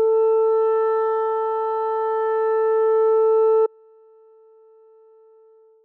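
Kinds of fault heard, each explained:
Audio dropout to a faint residue: at 3.66 s the music cuts out abruptly and does not return before the end, leaving only a faint leak of it roughly 35 dB below normal level, likely from the signal path losing its source while the downstream path stayed live.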